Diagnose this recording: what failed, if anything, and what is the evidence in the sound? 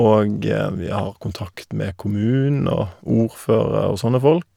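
Nothing failed; no stage leaves audible evidence of trouble.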